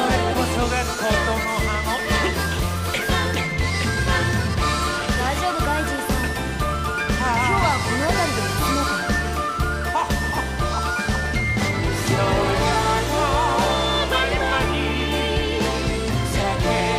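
From start to finish there's USB whine, a steady 1 kHz tone well below the sound, where the bus's 1 ms frame current is leaking in through power or ground.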